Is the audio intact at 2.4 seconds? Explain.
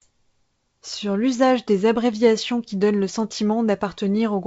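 Yes, the audio is intact at 2.4 seconds, with the speech passing through cleanly at that moment.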